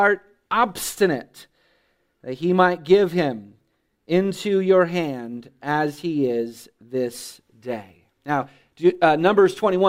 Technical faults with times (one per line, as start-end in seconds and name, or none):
none